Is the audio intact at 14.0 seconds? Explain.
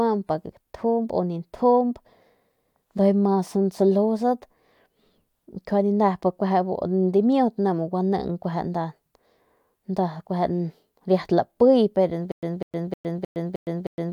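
No. At 14.0 seconds you're right inside a stutter with silent gaps that starts at 12.32 s and runs to the end of the clip. The same speech fragment, about 198 ms long, keeps coming back at a steady pace, one every 310 ms or so, with roughly 112 ms of dead digital silence between. That's six repeats in all. The likely cause is a stalled player or stream replaying its last buffer on each retry, so the real audio for that stretch is simply gone.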